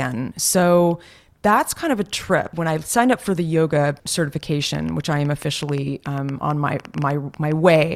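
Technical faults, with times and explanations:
4.75 to 7.77 s, train of clicks: a run of about twenty near-identical pulses, about 6.3 per second at an uneven pace, ticks over the speech and through its pauses, peaking a few decibels above the speech itself. The likely cause is interference pulses or a struggling interface. Unlike random crackle, the clicks share one shape and persist as a sustained sequence, and unlike dropouts they add sound on top rather than removing any.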